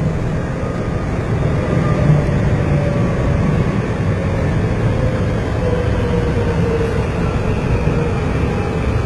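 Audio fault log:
throughout, HE-AAC compression: gritty, metallic treble ending near 11.8 kHz, likely from band replication copying lower bands upward, unlike a plain low-pass's dull top; heavy damage suggests about 16 kbps.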